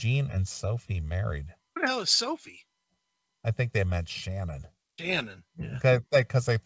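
No technical faults are audible.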